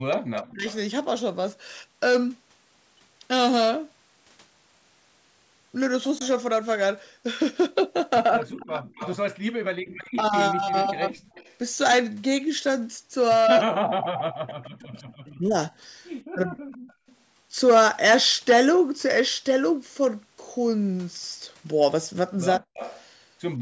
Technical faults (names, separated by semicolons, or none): speech suppressed in double talk; echo leak; background gated by the echo canceller